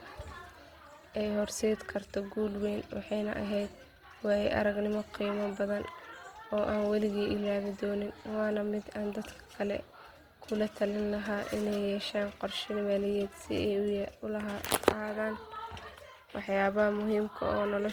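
All the way through, the speech has a grainy, rough texture, with bands sounding filled in by noise rather than hollowed out. That points to likely Opus compression in its music mode at a low rate, around 24 kbps, keeping full bandwidth up to about 20.2 kHz.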